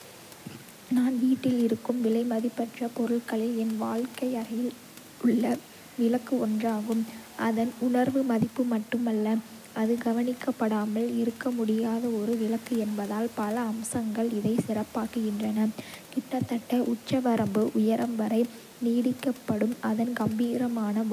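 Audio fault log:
No faults heard anywhere in this speech clip.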